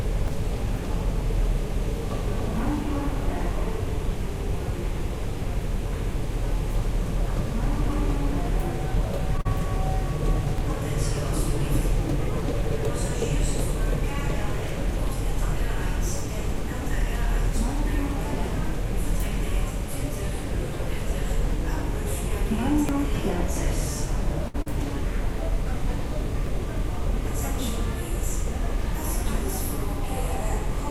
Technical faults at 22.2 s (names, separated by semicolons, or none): none